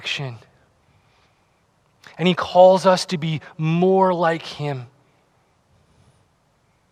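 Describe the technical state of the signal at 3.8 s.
At 3.8 s the audio is intact, with no audible fault in the signal at that moment.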